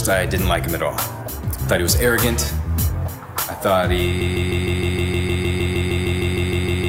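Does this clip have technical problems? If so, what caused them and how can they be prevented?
Yes. Broken-record loop from 4.21 s to the end: a 0.15 s fragment repeats 17 times, likely from a stalled player or stream resending its last buffer, so the following audio is lost. Prevent it by monitoring stream health and having the player detect stalls and output silence or resynchronise rather than replaying stale buffers.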